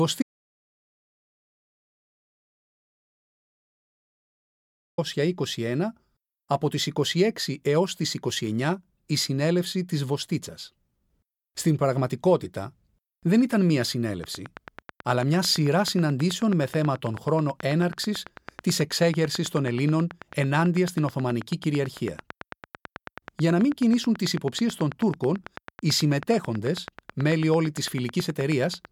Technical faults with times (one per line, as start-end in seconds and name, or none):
0.22-4.98 audio dropout to silence
14.24-28.86 train of clicks